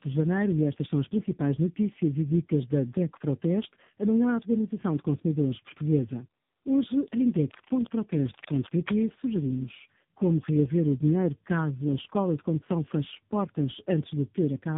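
Right through, there's tandem speech coding: the speech was decoded and re-coded through four speech coders in a row, likely ending on AMR-NB, so it's rough, warbly and muffled, with nothing above 3.8 kHz.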